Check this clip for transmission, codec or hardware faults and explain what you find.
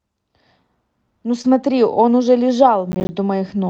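Three faults can be heard, two packet-loss events close together near 1.4 s and a burst of processor overload crackle near 2.9 s, all carried over an Opus call path whose content stops around 8 kHz.

From 1.41 to 1.46 s there is short concealed packet loss. About 20 ms of audio arrived too late to decode, and the receiver filled 27 ms by extending the preceding sound and blending back. It is heard as a brief smear.

Overlapping it, from 1.44 to 1.46 s, a lost packet was rebuilt from error correction. One 20 ms packet was replaced by the lower-bitrate copy carried in the next packet. It sounds rougher and noisier, and the spectrogram shows a short, grainier patch.

From 2.92 to 3.09 s comes processor overload crackle. The processor missed roughly ten deadlines, which fits buffers of around 10 ms, and each missed buffer played as silence. The result is a gritty tearing, seen on the waveform as hard-edged dropouts to silence repeating across that span.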